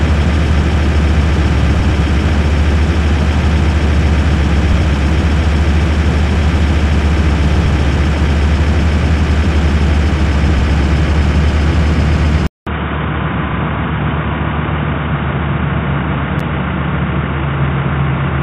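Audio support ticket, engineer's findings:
Sound turns dull and boxy from 12.47 s to end, after a 200 ms silence. Nothing above 3.8 kHz, level down about 5 dB, new noise floor roughly 40 dB under signal. Input likely switched to a poorer device.

Brief dropout at 16.40 s, 9.3 ms, smeared edges, sound resumes where it stopped. Gap at a join of encoded pieces: encoder start delay and last-frame padding left untrimmed.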